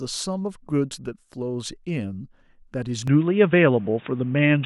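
At about 3.08 s the speech suddenly goes dull and boxy and stays that way to the end. Nothing comes through above about 3.8 kHz, the level shifts by around 5 dB, and a faint new noise floor sits well below the signal. There's no gap at the change. That's most likely an input switched to a poorer device mid-recording, with a narrower-band mic that brings its own tone, gain and background noise.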